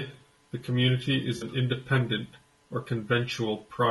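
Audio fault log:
throughout: low-delay AAC compression. The speech is plainly rough and grainy, with a hiss-like texture filling the gaps between pitch harmonics and an upper band that sounds thin and somewhat synthetic. This is likely AAC-ELD, the low-delay AAC used for calls, at a rate that fits about 32 kbps. Its short analysis frames cannot separate closely spaced harmonics well, and at this bitrate the coder spends its bits coarsely, so quantisation noise spreads across the spectrum.
1.37 to 1.43 s: AAC frame loss with concealment. Right after "the community is", the sound briefly smears into a noisy patch. The decoder lost part of the stream, about 40 ms of signal, which fits two dropped frames. It covered the gap by rebuilding sound from the last good spectrum, with altered signs or interpolated energy, instead of producing silence. The result keeps the rough spectral outline but loses the real detail, so it sounds blurred and noisy rather than silent.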